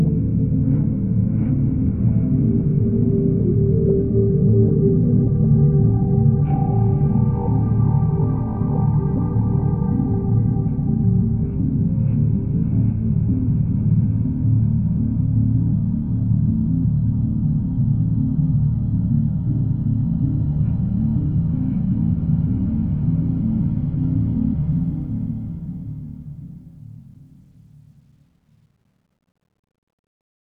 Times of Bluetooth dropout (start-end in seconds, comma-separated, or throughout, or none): none